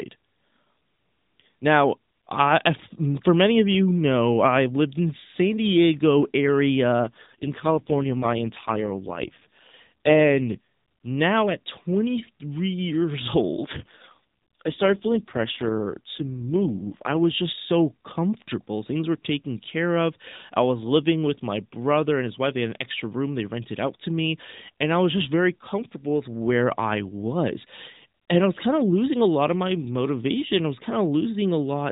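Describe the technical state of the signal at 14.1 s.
At 14.1 s the speech is inside an AMR rate drop running from about 13.58 to 17.24 s. Over a weak radio link the mobile codec is pushed to a lower mode, spending its bits on error protection rather than on the voice. The band stays the same narrowband width, with nothing above 4 kHz, and there is no gap, but the voice turns rougher and buzzier. That fits a step from the 12.2 kbps mode down to 4.75 kbps.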